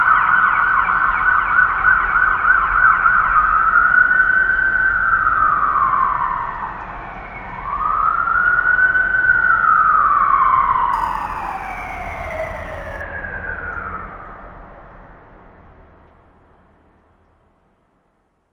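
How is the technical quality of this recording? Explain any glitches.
One glitch stands out, a stretch of crude rate conversion from 10.93 to 13.01 s. Samples were dropped without filtering, consistent with a 48 kHz to 44.1 kHz step, adding inharmonic fizz roughly 30 dB below the sound.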